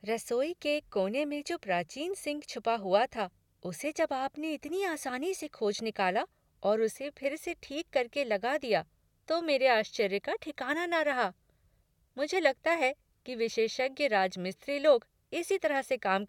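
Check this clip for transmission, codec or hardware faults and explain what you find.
Nothing stood out on listening to this speech recording; it holds up without anything that would point to a problem in how it was sent, encoded or captured.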